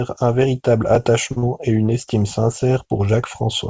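At 1.32 s there's a short stall from a late packet: a packet didn't turn up in time, the jitter buffer ran dry, and the receiver stretched the last bit of speech for about 45 ms until it arrived. Nothing's actually lost, just a sound held a touch too long with a faint buzzy dip.

Right after, from 1.38 to 1.44 s, there's a short concealed packet loss. About 40 ms never reached the decoder, so the receiver extended the preceding sound to cover the gap and blended back in, which comes across as a quick smear or wobble. It sits on the same band-limited call audio, with nothing above 8 kHz, which fits a wideband codec like G.722.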